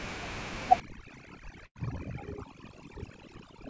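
From 0.8 s to the end, overdone noise removal suppresses bands near the room noise, about 19 dB below the speech, leaving near-silent gaps with twinkling specks. At 1.66 to 1.77 s, a burst of packet loss lets the receiver extend and fade the last sound for about 93 ms; roughly 100 ms of speech is skipped. Nothing above 8 kHz comes through, consistent with a wideband call codec such as G.722.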